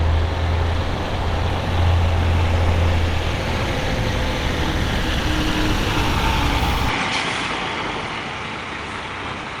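At 6.89 s the sound abruptly loses its top end, with nothing above 10.5 kHz from there to the end, and it drops in level by around 5 dB. A faint new background noise, some 40 dB beneath the sound, also appears at that moment. This points to the input switched to a poorer device, likely a different microphone taking over. There is no gap at the switch, so it can resemble a filter or gain change. The simultaneous shift in noise floor and tone marks a different pickup.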